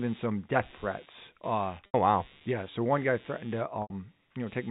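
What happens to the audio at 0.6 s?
At 0.6 s the speech carries computer activity noise, present for the whole clip: a buzzing chatter pulsing at roughly 150 times a second, sitting around 30 dB below the signal. Processor or peripheral load is disturbing the audio circuit's shared ground, so the noise follows the machine rather than the speech, and the telephone-band G.711 coding carries it through.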